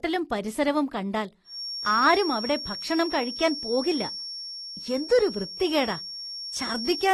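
From the start, the speech sounds dull and smeared with a fizzy warble, nothing above 12.1 kHz, which fits AAC compression, likely at around 32 kbps, unlike plain low-pass filtering. From 1.43 s to the end, a thin steady feedback whistle at 5.5 kHz sits roughly 10 dB under the speech, swelling and fading slowly but never building, likely a loop held just short of runaway howl.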